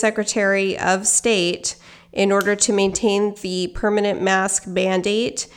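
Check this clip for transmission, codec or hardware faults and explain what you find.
Nothing stood out on listening to this speech recording.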